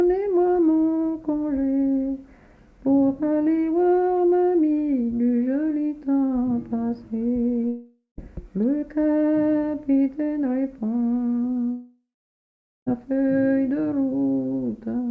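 At 7.68 to 8.19 s and 11.71 to 12.88 s, the audio smears into a fading buzz, then silence, returning with material missing: likely a long network dropout.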